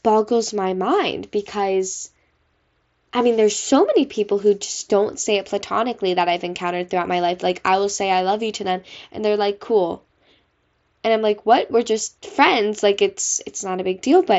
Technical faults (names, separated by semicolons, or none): none